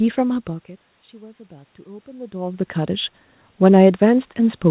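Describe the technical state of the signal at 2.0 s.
At 2.0 s the automatic gain rising is under way, spanning 1.48 to 3.08 s. After the input fell by about 23 dB, the gain control slowly lifts its gain by about 4 dB, so speech and room noise swell together. The waveform envelope and the noise floor on the spectrogram climb steadily.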